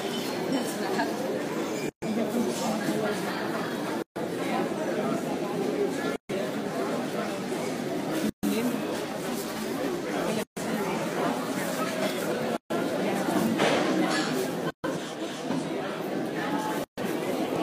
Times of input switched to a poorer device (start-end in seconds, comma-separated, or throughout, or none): none